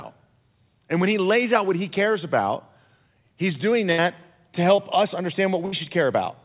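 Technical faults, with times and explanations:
3.92 to 4.00 s and 5.66 to 5.74 s, burst of packet loss: Right after "he's doing", and again near the end, the sound stalls into a held, fading buzz or hiss for about 60 ms, then resumes slightly further along with a piece skipped. Several consecutive packets arrived too late or not at all. The receiver extended the last sound while turning it down, and about 60 ms of real audio was dropped each time.
4.76 to 4.80 s, short concealed packet loss: A brief smear or wobble lasts about 20 ms. A small slice of audio never reached the decoder in time, so the receiver synthesised a continuation of the preceding sound and blended it back into the real signal. The call's narrow band, with nothing above 4 kHz, fits a G.711 mu-law link.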